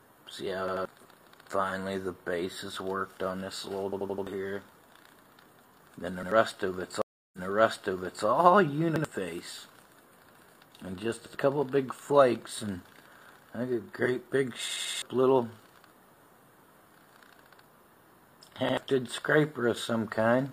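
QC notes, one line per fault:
0.68–0.85, 3.93–4.27, 6.23–6.32, 8.96–9.05, 11.26–11.35, 14.68–15.02 and 18.69–18.77 s, repeated buffer: each is a stutter where a piece about 85 ms long sounds again with a hard join at every repeat, twice more at 0.68 s, four times more at 3.93 and 14.68 s, once more at the others. New audio did not arrive in time, so the device replayed its last buffer, which fits a 4096-sample buffer. Roughly 100 to 300 ms of audio is lost at each.
7.02–8.26 s, stream reconnect: the audio drops out for 315 ms, then comes back fading in, at a point about 0.93 s earlier than where it stopped, so that stretch is heard twice. The connection broke and the player went silent, then reconnected and started a fresh decoder mid-stream. The server resent a burst of recent audio, hence the jump backwards, and the new decoder's first frame fades in.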